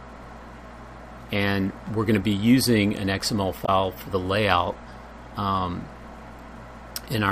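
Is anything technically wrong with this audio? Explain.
Yes, there's one glitch. From about 3.62 to 3.69 s you get a short burst of damaged data in a compressed stream, roughly 70 ms of it. Some of the encoded bytes at that point were corrupted, so the decoder either misreads those frames or throws them out, loses its place, and has to hunt for the next valid frame header before it can carry on. What comes out is a brief chirp, squawk, click or short hole cutting across the sound.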